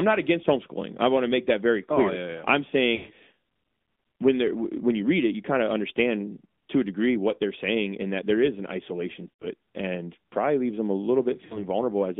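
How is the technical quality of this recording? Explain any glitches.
The recording has been through a narrowband mobile speech codec and has three brief dropouts.

Throughout, an AMR narrowband mobile codec encodes the speech by modelling the vocal tract and driving it with a few pulses per short frame. Only about 200 Hz to 3.6 kHz survives. The speech sounds thin and boxy, with a plainly audible buzzy, synthetic edge. This fits a mid-range rate of around 10.2 kbps.

Lost AMR speech frames occur at 2.96 to 3.12 s after "yeah I'm", at 9.30 to 9.46 s between "there is an isolation" and "it and probably leaves", and at 11.46 to 11.65 s after "probably leaves them a". Corrupted frames were discarded, and the decoder filled each gap by reusing the last good settings at falling gain. The 120 ms and 100 ms gaps smear into a fading drone, and the 40 ms one is a short dip.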